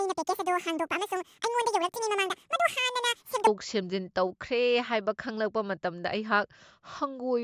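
A wrong sample rate, which fits 16 kHz audio played back at 32 kHz, makes the speech from 0.0 to 3.47 s run twice as fast and an octave higher.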